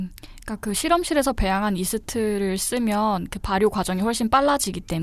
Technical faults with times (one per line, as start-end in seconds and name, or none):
none